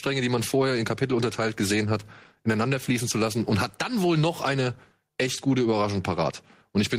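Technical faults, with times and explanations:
throughout: gain pumping. The gain swings by around 10 dB, falling on loud talking and rising in the gaps. The likely cause is input gain set far higher than the microphone needed, with a fast limiter or compressor clamping every peak and releasing in the gaps. Loud and quiet passages sit close together in level, so the speech sounds squashed.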